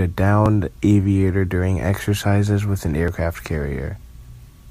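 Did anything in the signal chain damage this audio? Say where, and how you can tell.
Yes. Two jumps, at 0.46 s just before "aviator during exercises with" and at 3.08 s after "during exercises with an", are likely dropped buffers (overrun) at the driver stage. A few milliseconds go missing, leaving a waveform discontinuity without any gap and a thin vertical broadband line on a spectrogram.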